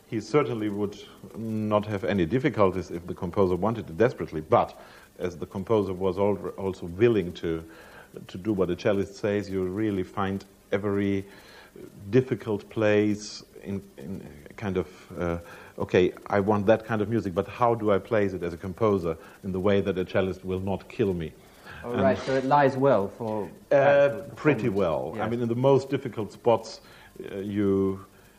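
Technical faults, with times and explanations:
5.21 s and 22.26–22.29 s, corrupt frame decoded: each time a single compressed frame arrived with flipped bits and was played anyway, so misread gains and codes put stray energy at wrong frequencies for that frame's length. The first is faint; the second is much louder.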